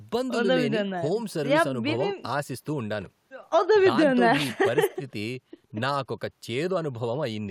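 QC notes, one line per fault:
No technical faults were found anywhere in the signal.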